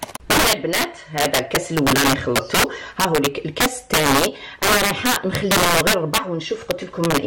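Integer overflow runs through the whole audio clip. The signal is pushed about 9 dB past full scale, and the small share of peaks that exceed the limit wrap around to the opposite sign instead of being held, producing violent cracks far harsher than ordinary clipping.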